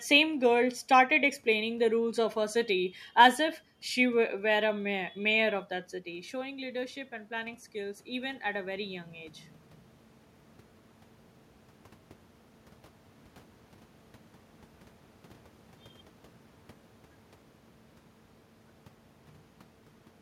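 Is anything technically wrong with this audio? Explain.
Yes. From 6.04 to 9.42 s there is automatic gain rising. Around 6 s the talker moves away and the level at the microphone drops by about 11 dB. The gain control reads that as a quiet input and raises its gain over more than three seconds, by about 7 dB in total. What separates this from simple talker movement is that the room noise swells along with the voice during those seconds, so the whole sound creeps up together instead of only the voice changing.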